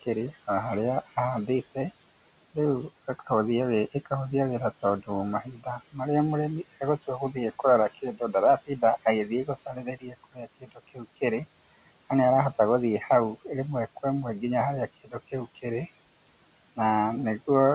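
Noise suppressor artifacts run throughout. The suppressor lowers the steady room noise by about 17 dB frame by frame, so the background sinks in pauses and swells under the speech. Everything sits below 4 kHz, which fits a narrowband call codec such as G.711.

Speech cut by the noise suppressor occurs at 5.42–5.98 s, at 9.29–11.22 s and at 15.04–15.15 s. Each time the suppressor mistook quiet speech for noise and pulled it down, by about 16 dB, 17 dB and 13 dB respectively. Softer sounds come out swallowed and faint, for roughly a third of a second in the first stretch, well under a second in total across the long middle stretch, and only a brief moment at the end.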